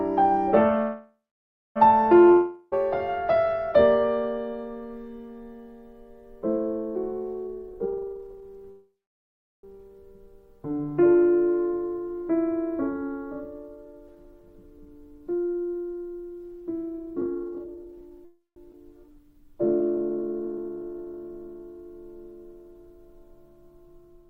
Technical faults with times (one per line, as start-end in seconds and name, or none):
0.81-1.78 call audio freeze
2.32-2.74 long network dropout
7.47-8.68 jitter buffer speed-up
8.71-9.65 call audio freeze
13.76-18.18 jitter buffer speed-up
18.25-18.58 call audio freeze
18.72-18.75 skip ahead
19.08-21.59 jitter buffer slow-down